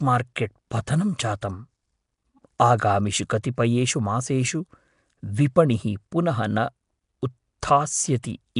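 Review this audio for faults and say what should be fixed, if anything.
Throughout the speech there is a rough, hissy halo and a smeared, underwater quality. This is plainly audible damage from Nellymoser compression, most likely Nellymoser Asao at a data rate that sounds like about 44 kbps. The codec spends the same few bits on every block, so weak bands get nothing and are filled with noise. On a spectrogram, the energy stops sharply at 10.6 kHz, and patchy, grainy noise fills the quieter bands. Record or export with a modern codec at a higher bitrate.

Pre-echo appears at 2.59 s and again at 8.23 s. In each case a short hiss runs for about 11 ms ahead of a sharp attack, which then sounds soft. The attack falls late in a transform block, and the quantisation noise sized for the loud onset spreads back into the quiet moment before it. On a waveform this shows as a thin noisy smear just before each transient. 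A spectrogram shows a broadband haze leading the onset. A codec with block switching or short windows for transients would prevent it.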